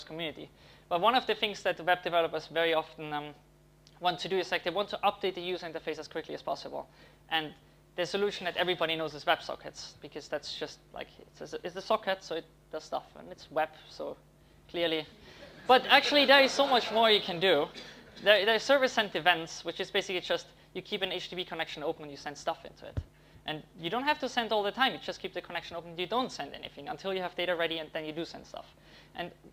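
Nothing technically wrong turns up anywhere in this audio, so there are no fault times or causes to point to here.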